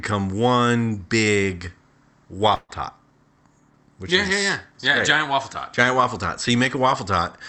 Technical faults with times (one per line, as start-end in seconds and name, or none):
2.55-2.71 burst of packet loss